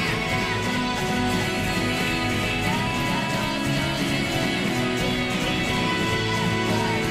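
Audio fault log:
Throughout: doubled audio track. A second full-band copy of the sound runs roughly 0.4 s behind the first at about the same level, so every onset is heard twice in a clean repeat with no decay or room colour between them. The likely cause is the same signal reaching the mix twice, either captured again through a slower path or left as two out-of-step copies by an edit, which stacks identical material offset by a fixed delay.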